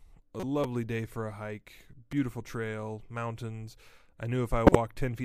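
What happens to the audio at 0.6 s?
At 0.64 s there is a repeated buffer. The playback device did not get fresh audio in time, so it played its last block of speech once more. That block lasts about 5.8 ms, which fits a 256-sample buffer. Because the repeated piece is so short, it is heard as a click or brief buzz rather than a stutter. There is a hard join where the copy starts. A few milliseconds of real audio are skipped.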